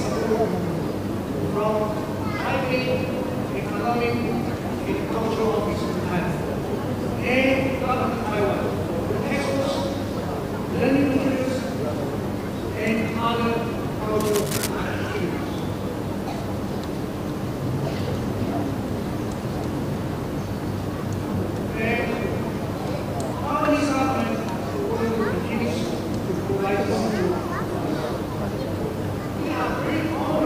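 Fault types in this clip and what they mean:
Cable scratch noise: From about 14.20 to 14.70 s, a burst of rough scratching and rustling sits over the sound, only a little quieter than it. This is likely a worn cable, connector or control being moved, so its contact resistance jumps about and injects ragged noise. On a waveform it shows as a half-second patch of dense, jagged spikes of uneven height. A spectrogram shows broadband, irregular vertical streaks clustered in that window.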